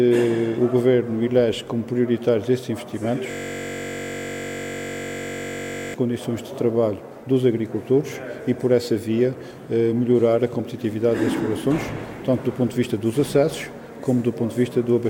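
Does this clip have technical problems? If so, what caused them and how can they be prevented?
Yes. A system hang loop from 3.31 to 5.94 s: a 21.33 ms slice repeats exactly, giving a steady 46.9 Hz buzz rather than silence or stutter, which fits a 1024-sample buffer. To prevent it, keep the audio thread responsive and have the driver mute output when buffer refills stop arriving.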